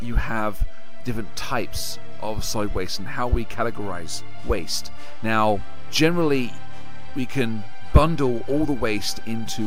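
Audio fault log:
throughout: DC offset, the waveform sits shifted off zero by about -21 dBFS, inaudible itself but eating headroom and showing as steady energy at 0 Hz.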